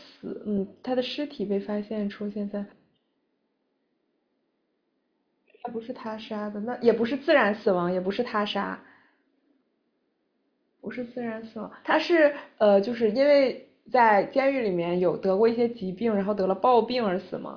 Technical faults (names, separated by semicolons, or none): none